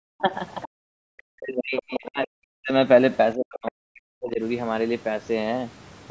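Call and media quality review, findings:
Background gated by the echo canceller: room noise drops about 40 dB at 0.09–0.19 s and 0.68–0.98 s; the waveform floor flattens to near-silence, and the spectrogram shows blank vertical gaps.

Other side's voice leaking through: second voice at 0.61–0.68 s and 1.77–1.83 s, likely residual echo the canceller missed; it sits about 20 dB and 10 dB below the talker's level.

Speech suppressed in double talk: talker's level falls deeply across 1.26–2.72 s and 3.35–4.41 s, likely the canceller ducking both sides during overlap; the deepest drops reach about 40 dB.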